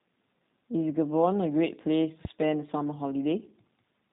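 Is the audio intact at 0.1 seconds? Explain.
No. At 0.1 s the speech has already passed through the G.729 codec, which affects the whole clip rather than a single moment. Instead of carrying the waveform itself, the codec models each short frame as a vocal tract filter fed by a pitch predictor and a handful of pulses, and discards everything above 4 kHz. The result is muffled, band-limited speech with a plainly audible rough, buzzy, synthetic quality, consistent with roughly 8 kbit/s G.729A.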